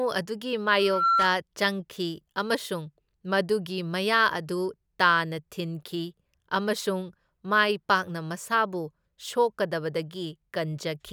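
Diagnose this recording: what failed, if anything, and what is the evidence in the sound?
Loudspeaker feedback squeal in the analogue mic-to-speaker loop: from 0.79 to 1.38 s a 1.4 kHz tone swells to about 5 dB over the speech. Unlike steady interference, it builds up.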